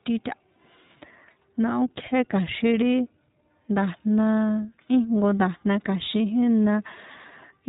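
From start to finish the speech carries the sound of the iLBC codec, a narrowband VoIP coder. Everything above 4 kHz is gone, so consonants lose their crispness and the sound is boxed in. Each short frame, which fits a 20 ms frame at around 15.2 kbps, has its excitation coded on its own with no help from the frame before. The damage is plainly audible: the speech stays clear but sounds rough and somewhat synthetic.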